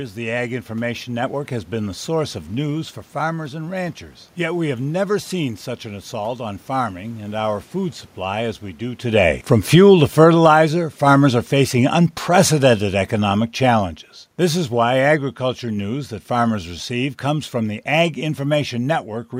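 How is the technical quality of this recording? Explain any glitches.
The main problem is an automatic gain falling, from 9.02 s to 16.62 s. The automatic gain control judged the input too loud, or its background noise too strong for the gain it started with, and pulled its gain down step by step, by about 12 dB over those 7.6 seconds. In the sound, the speech starts full and then steadily sinks, and the room noise sinks with it, which is how this differs from a simple change in distance. Around 9 s the talker also shifts position relative to the microphone, changing the level at that point, but that is ordinary movement, not a system fault.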